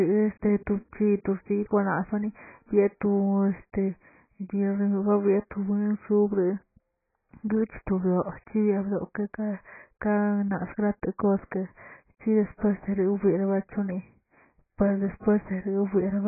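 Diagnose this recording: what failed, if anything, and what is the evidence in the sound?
The speech sounds dull and smeared from start to finish, with nothing above about 2.5 kHz and a heavy, warbling texture. This is likely AAC compression at the codec stage, at a rate consistent with roughly 12 kbps. The encoder kept too few bits per frame to code the upper bands, so it dropped them and coarsely quantised the rest.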